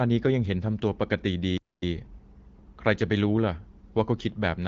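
A speech clip with a playback stall: the audio cuts to silence from 1.58 to 1.82 s, a gap of about 245 ms, then resumes. The likely cause is the player running out of buffered data or its thread being blocked. The HD Voice band-limited character fits AMR-WB at around 12.65 kbit/s.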